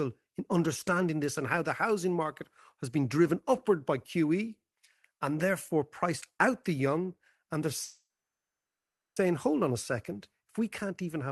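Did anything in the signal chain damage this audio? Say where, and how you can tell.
Yes: a call audio freeze at the jitter buffer, 7.83 to 9.18 s, likely from stalled packets. A brief fading buzz or hiss becomes a flat waveform gap, then speech resumes intact.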